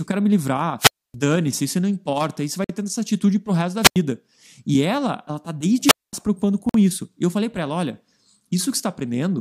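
A Portuguese speech clip with two problems. Wireless microphone squelch dropouts hit at 0.79 s after "eu quero me", at 3.82 s after "atitude pro resto da", and at 5.84 s, with hiss rising before mutes of roughly 270, 90 and 220 ms as the receiver's squelch shuts off a fading signal. Separately, there's a 50 ms gap between chunks at 2.64 s and again at 6.69 s after "se preocupando", four seconds apart, which fits audio delivered in 4 s chunks with silence left at each join.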